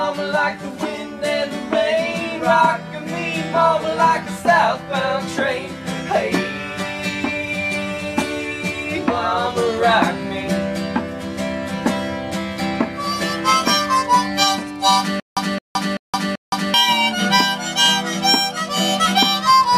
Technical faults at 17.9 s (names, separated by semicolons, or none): none